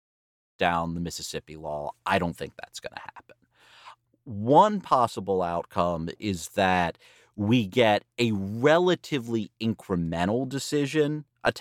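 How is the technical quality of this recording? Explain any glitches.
No technical faults are audible.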